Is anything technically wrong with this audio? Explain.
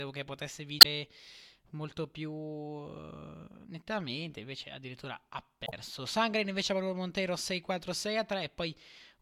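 Yes. Two brief glitches break the speech, one from 0.78 to 0.86 s, just after "che potesse", and another from 5.66 to 5.73 s. Both are damaged data in a compressed stream: bytes in those stretches were corrupted, so the decoder misread the affected frames, lost sync, and jumped to the next valid frame header.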